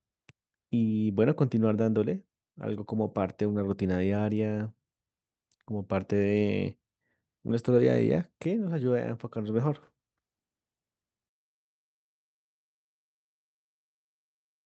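Nothing goes wrong anywhere in this speech, which just carries the ordinary sound of a call line, with the top end stopping at around 8 kHz in a way that fits the Opus codec running at about 48 kbps.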